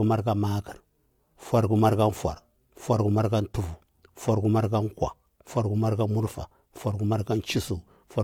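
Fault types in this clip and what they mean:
No fault turns up here: the speech runs without any dropout, glitch or other problem you'd pick up by ear.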